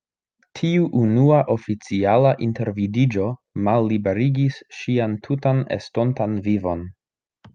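No technical faults can be heard anywhere in this speech recording.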